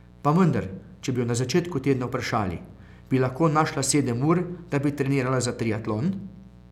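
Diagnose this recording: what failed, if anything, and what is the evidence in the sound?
The failure is in the analogue wiring: a mains buzz runs under the speech for the whole clip, a steady, raspy tone sitting roughly 25 dB below the voice. Its fundamental is at 60 Hz, so it comes from a 60 Hz supply. Switching spikes from a dimmer, rectifier or unshielded run are entering the signal path twice per mains cycle. That gives a 120 Hz pulse train whose harmonics extend into several kHz, which accounts for the edge on the buzz.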